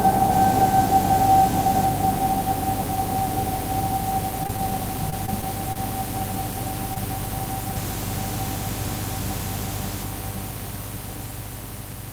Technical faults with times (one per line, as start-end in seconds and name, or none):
4.43-4.73 repeated packet loss (robotic sound)
5.10-5.77 repeated packet loss (robotic sound)
6.94-6.98 short stall from a late packet